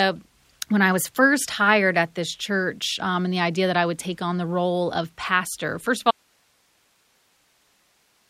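At 6.11 s the speech cuts out abruptly mid-flow and does not return before the clip ends: an audio dropout to a faint residue. What remains is a steady hiss roughly 40 dB below the speech level, with no fade or natural pause leading into it. The likely cause is the wanted signal being lost at some point upstream while the rest of the chain stayed live, so only its self-noise carries on to the end.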